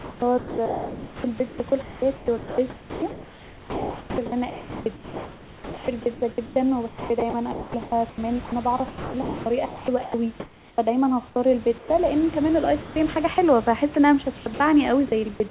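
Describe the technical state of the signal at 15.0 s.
At 15.0 s the audio sits inside a stretch from 14.38 to 15.4 s that sounds chopped by the voice detector. Over that second the sound switches on and off, with about 220 ms in total swapped for comfort noise, set against room noise about 22 dB below the speech. The likely cause is the sender's voice detector toggling transmission, not packet loss. Lost packets would leave silence, clicks or smeared repeats rather than matched noise. The narrowband call path, with nothing above 4 kHz, stays steady throughout.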